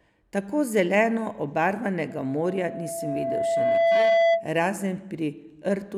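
At about 2.09 s a loudspeaker feedback squeal starts creeping in under the speech: a single tone near 669 Hz that swells steadily for roughly two seconds until it sits around 10 dB above the talker. What's going on is a mic hearing the speaker it feeds, with the loop gain tipping past unity at that one frequency, so the tone keeps reinforcing itself. It cuts off at 4.50 s.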